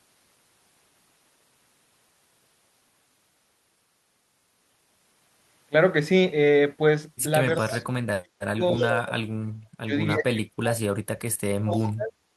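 At 7.6 to 7.84 s, 8.78 to 8.88 s and 11.74 to 11.81 s, faint scraps of echo leak trail the speech by 285 ms, some 20 to 30 dB down. This is likely an echo canceller passing through what its microphone caught, distinct from reverb by its fixed delay. The speech suppressed in double talk dips deeply at 7.63 to 7.82 s, 8.18 to 9.17 s, 9.74 to 9.93 s and 10.15 to 12.15 s, likely because a canceller ducked both talkers. These are gaps, not added sound.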